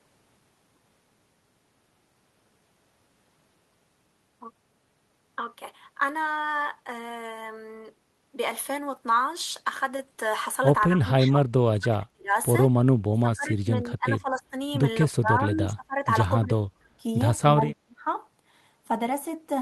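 Speech suppressed in double talk affects this speech: the echo canceller likely could not separate the talker from the other side's echo and turned the talker down by roughly 20 to 30 dB at 10.89–11.5, 11.79–12.34, 12.74–12.83, 13.12–14.56, 15.08–16.08, 16.4–17.05 and 17.44–18.07 s.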